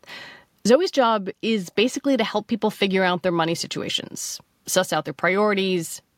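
No technical faults can be heard anywhere in this speech recording. Nothing in it calls for a timestamp or a repair.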